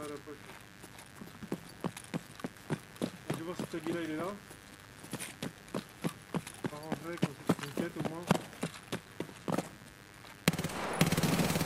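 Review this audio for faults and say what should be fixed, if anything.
A mains buzz runs through the whole clip. It is a steady, raspy tone built on 50 Hz, sitting about 20 dB below the signal. The rasp comes from sharp switching spikes, twice per mains cycle, entering the audio path through a dimmer, rectifier or gap in the shielding. Those spikes spread harmonics of 50 Hz well up into the kilohertz range. To prevent it, use balanced, properly shielded cabling and keep the chain away from dimmers and switching supplies.

Periodic USB or driver dropouts appear from 0.06 s to 11.56 s. They repeat every 0.125 s, eight times a second, around a hundred in all. Each loses roughly half a millisecond of audio, replaced by silence. The result is an even train of small ticks, audible only while sound is present. Something in the background is stalling the USB bus or audio driver on a fixed schedule. 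To prevent it, find and disable the polling task, or raise the driver buffer size.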